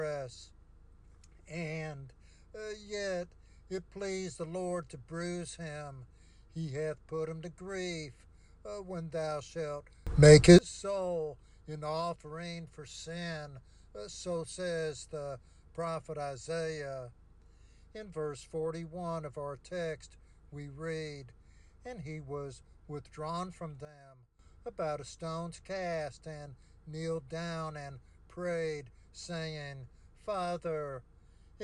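At 10.07 s the level jumps up by about 24 dB, holding until 10.59 s. At 23.85 s it drops by about 14 dB until 24.39 s. Each sudden gain jump moves sound and background together. The likely cause is gain applied without a ramp.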